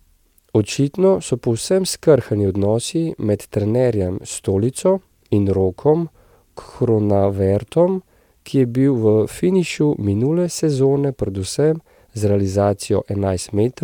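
No technical faults can be heard anywhere in the recording; the speech signal stays continuous and steady throughout.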